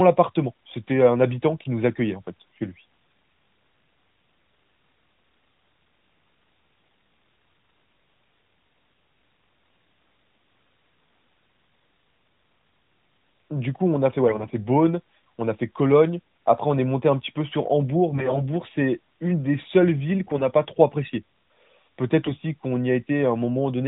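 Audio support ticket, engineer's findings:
AMR bit errors at 14.28–14.50 s, 18.12–18.42 s, 20.26–20.43 s and 22.22–22.31 s. Speech turns hoarse and gargly, pitch and level roughly held. Weak radio link flipped a few percent of the lightly protected frame bits while the core checksum still passed, so pulse positions and fine pitch, gain and spectral values decode wrong. Narrowband AMR carrier underneath, consistent with the 12.2 kbps mode, shows light codec damage.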